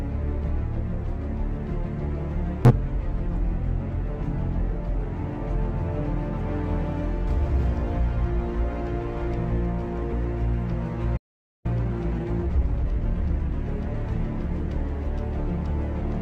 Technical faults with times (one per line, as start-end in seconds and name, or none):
2.65-2.71 damaged data in a compressed stream
3.76-3.80 damaged data in a compressed stream
5.95-5.98 damaged data in a compressed stream
10.08-10.13 damaged data in a compressed stream
11.16-11.66 playback stall
11.66-13.56 time-compressed catch-up
13.90-13.95 damaged data in a compressed stream